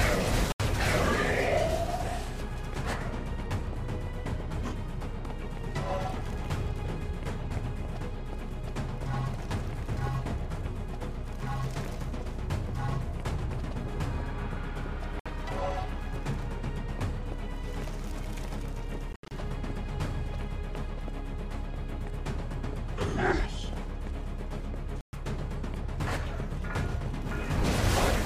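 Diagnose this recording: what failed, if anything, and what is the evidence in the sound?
Playback link, likely a Bluetooth dropout: late packets got dropped, leaving 60–140 ms silences at 0.52, 15.2, 19.1–19.3 (choppy) and 25.0 s.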